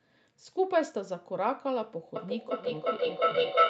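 At 2.16 s a feedback howl kicks in and runs right to the end of the speech clip. Two devices in the same room are on one call, so the sound keeps cycling from loudspeaker into microphone and comes back stronger each trip. It narrows to a tone somewhere around 1.5 kHz, repeating about every 400 ms or so, and peaks about 8 dB above the speech. It's never cut off, so the loop is never broken.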